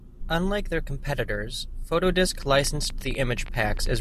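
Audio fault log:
2.43 to 3.98 s, train of clicks: from about two and a half seconds almost to the end of the clip, a run of roughly twenty sharp ticks rides over everything, pauses included, at about 14.9 per second but with uneven spacing, so it sounds like a scattered crackle rather than a steady buzz. The clicks share much the same shape and poke out a little above the signal, by about 5 dB, which points likely to interference from nearby gear or a faulty connection or power supply.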